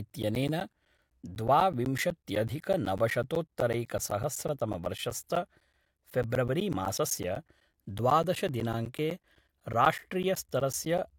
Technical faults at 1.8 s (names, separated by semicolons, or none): periodic USB or driver dropouts